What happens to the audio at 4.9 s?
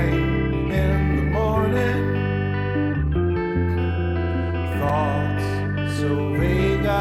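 A brief tick, almost a tiny pop, lands at 4.89 s. It comes from a block of digital silence lasting about 5.3 ms: the signal drops straight to zero and returns with no fade, so each edge forms a hard step that the ear hears as one click. A dropout this short, which fits a 256-sample buffer, points to the program failing to fill its output buffer in time.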